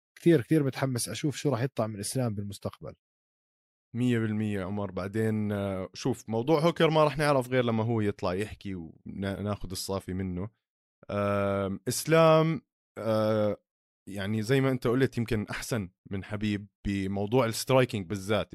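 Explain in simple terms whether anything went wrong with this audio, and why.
Nothing went wrong with this speech recording: no dropouts, glitches or other technical faults are audible anywhere in it.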